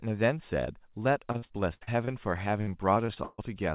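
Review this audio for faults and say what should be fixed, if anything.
Speech turns choppy, with a robotic edge, from 1.32 to 2.09 s and again from 2.61 to 3.40 s. This is repeated packet loss. In each burst a series of short holes is filled by stretching out the last sound heard. About a third of each stretch is this patched-in material, and the longest gaps run about 74 ms in the first burst and 139 ms in the second. The telephone-band call codec underneath passes nothing above 4 kHz.

To prevent it, stabilise the network link and enable forward error correction with an adaptive jitter buffer.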